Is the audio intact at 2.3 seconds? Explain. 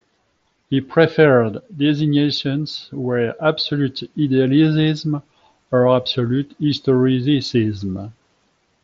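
Yes, the speech at 2.3 seconds is intact, with nothing interrupting or distorting it beyond the ordinary character of the Bluetooth mSBC headset codec it passes through.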